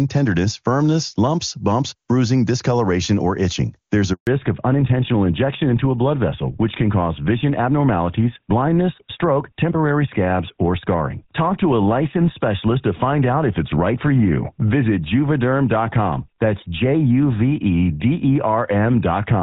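At 4.13 s a handover gap cuts the speech for 140 ms, until 4.27 s, as the call switches networks; unlike packet-loss concealment, it's a clean silence with no smeared repetition.

From 4.27 s onward, a fallback to narrowband removes everything above 4 kHz, making the speech duller and rougher than the clear HD Voice before it; unlike a momentary bandwidth dip, it never recovers.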